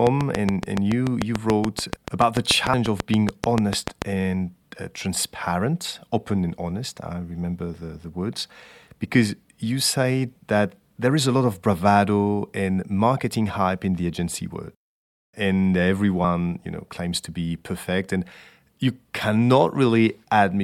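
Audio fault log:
0.07–4.03 s, train of clicks: likely interference from nearby equipment injecting a regular pulse 6.9 times per second, around 30 sharp ticks well above the speech, before "and uh transparent open".
2.74 s and 16.21–16.24 s, damaged data in a compressed stream: corrupted frames throw the decoder out of sync while it hunts for the next header, leaving a brief glitch; the second precedes "you know claims to".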